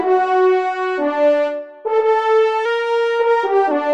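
From 2.65 s to 3.71 s the sound abruptly runs about 5.7% fast and sits roughly 95 cents sharp, nearly a semitone, then snaps back to its original speed and pitch. This is a drift correction step, likely from clock-matching software jumping the playback rate once to rebalance its buffer. Speed and pitch move together and hold steady for the whole second, which separates it from the gradual, wavering detune of wow or flutter.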